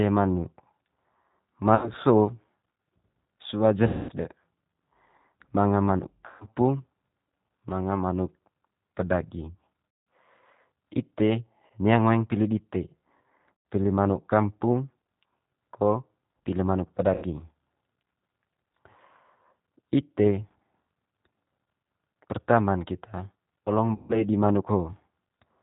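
Throughout the speech, G.729 coding at 8 kbit/s is plainly audible. The voice is rebuilt from a vocal tract filter and sparse pulses, so it sounds rough and synthetic. On a spectrogram, nothing appears above 4 kHz and the harmonics look smeared.

VoIP packet loss concealed by the speech codec occurs at 1.75, 3.87, 6.26 (after "manga manuk"), 9.89, 11.66, 13.62 (before "pili manuk kampung"), 17.14 (after "ko pili manuk") and 23.95 s. At each one the decoder stretches the last pitch and filter into a fading buzzy tone or coloured noise. The gaps run from 40 to 220 ms, which suggests runs of 20 ms packets. In the waveform they show as decaying, repetitive stretches followed by a weak recovery.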